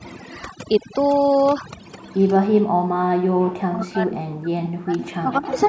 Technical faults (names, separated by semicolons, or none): overdone noise removal; echo leak; speech suppressed in double talk